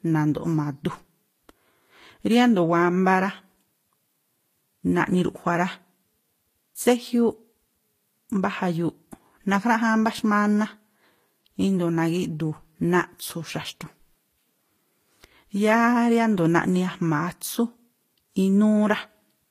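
Right through the speech there's a layered, smeary lossy texture and nothing above about 14.9 kHz, likely from transcoding between lossy codecs. It sounds like a low-rate HE-AAC pass, then Vorbis re-encoding those artefacts and adding its own, so both kinds come through together.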